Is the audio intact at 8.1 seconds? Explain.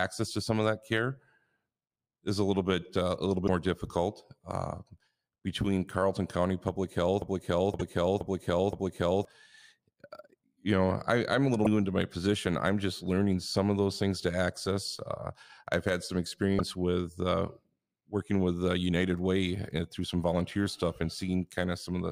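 No. A broken-record loop runs from 7.22 to 9.25 s, so 8.1 s falls inside it. A fragment of speech about 0.52 s long plays four times back to back, each repeat identical, giving a stuttering, mechanical cycle in place of natural continuation. The likely cause is a stall in the player, encoder or stream, which kept resending the last piece it held. Whatever should have been heard during those two seconds is lost.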